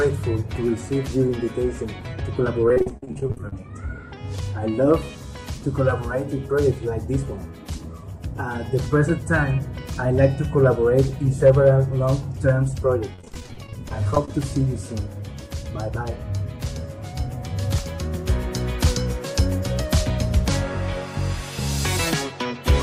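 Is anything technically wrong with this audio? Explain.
Yes. There are two stretches of repeated packet loss (robotic sound), at 2.68–3.53 s and at 13.14–14.30 s. In each stretch, audio data was lost or arrived late over and over. Each hole was bridged by extending the last received sound before the next hole arrived. The first stretch has around 18 gaps, about 320 ms missing in total, and a longest gap of 45 ms. The second has around 19 gaps, about 300 ms missing, and a longest gap of 33 ms. Both sound choppy, with pieces missing.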